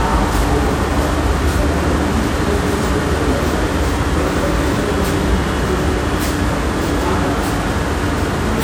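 From the first moment to the last, these sounds carry generation loss. Everything has a swirly, watery shimmer, the texture feels hollowed out with gaps in the spectrum, and sharp onsets get smeared rather than landing cleanly. It's rougher than a single moderate-bitrate MP3 would sound. The likely cause is the audio being decoded and re-encoded as MP3 around seven times, at something that fits 96 kbit/s, with each pass quantising on a shifted frame grid and stacking up fresh noise and holes.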